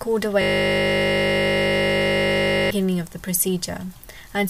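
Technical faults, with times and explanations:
0.42–2.71 s, system hang loop: the sound freezes into a single 20 ms slice repeated more than a hundred times, giving a steady buzz at 50 Hz for about 2.3 seconds. The system stalled while the playback hardware kept cycling the same short ring buffer. Unlike 50 Hz mains hum, which sits beneath ongoing audio, this replaces the audio entirely. Its short loop length also separates it from a long-buffer stutter, which would sound like a machine-gun rattle.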